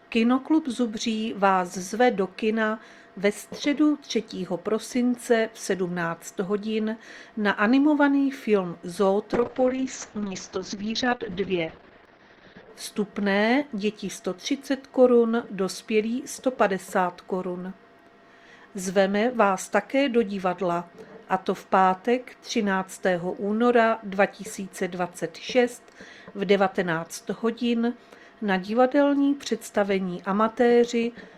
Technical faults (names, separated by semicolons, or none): call bitrate drop